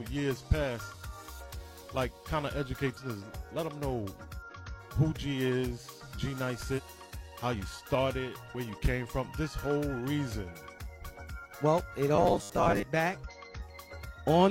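Short bursts of damaged data in a compressed stream occur at 2.93 to 2.98 s, 4.42 to 4.52 s, 6.74 to 6.80 s, 8.50 to 8.55 s and 13.24 to 13.31 s. Each lasts 46 to 110 ms. Corrupted bytes make the decoder misread frames and lose sync until it locks onto the next valid header. The result is a brief chirp or squawk.

From 12.16 to 12.84 s the sound becomes a rigid, metallic 100 Hz buzz, the robotic sound from repeated short buffers. It still loosely tracks the underlying audio. The likely cause is new audio arriving too slowly, so playback keeps reissuing the last stretch, which fits a 10 ms fragment repeated at that rate. Roughly half of this span is filled with repeats, and the real material they replace is skipped.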